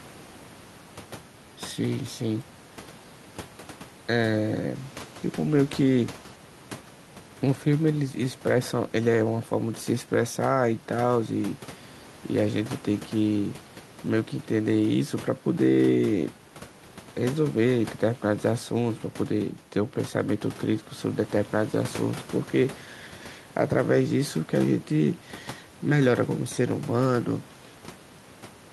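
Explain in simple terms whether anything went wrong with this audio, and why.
Nothing went wrong with this recording from a technical standpoint: the speech signal comes through intact, and the faint background noise, sitting well below the speech, is simply the sound of the room where the microphone was placed rather than anything caused by the equipment.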